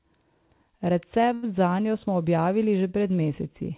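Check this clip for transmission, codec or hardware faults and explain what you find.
One transmission fault is audible in this speech clip.

A short stall from a late packet occurs between 1.34 and 1.45 s. A packet missed its playout time and the jitter buffer ran dry. The receiver stretched the last bit of sound for about 85 ms, then resumed where it left off once the packet arrived. No speech is lost, but one sound is held too long, with a faint buzz or dip. Everything after it plays 85 ms later than before.

The narrow band, with nothing above 4 kHz, comes from the call codec path, which sounds like G.711 A-law at 64 kbps.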